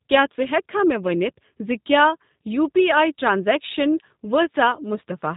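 From start to finish, the speech carries G.729 codec damage, plainly audible. The codec does not store the waveform. It models the voice as a vocal tract filter, a pitch predictor and a few pulses per short frame, then rebuilds it. The result here is rough and slightly synthetic. Nothing above 3.8 kHz survives, so the sound is narrow and muffled. The texture fits G.729A at 8 kbit/s.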